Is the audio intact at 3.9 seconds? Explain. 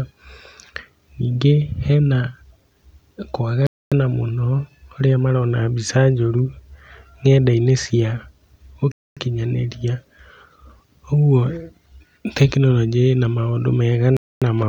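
No, 3.9 s falls inside a gap between chunks running from 3.67 to 3.92 s. A 250 ms hard-edged silence sits at a chunk join, which fits 5-second chunks, before "mũno harĩa marona". Unlike a dropout, no sound is lost; the speech resumes exactly where it stopped.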